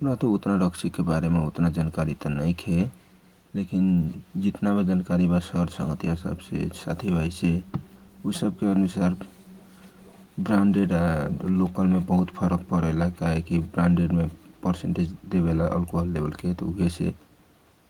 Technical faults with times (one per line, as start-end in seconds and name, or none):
none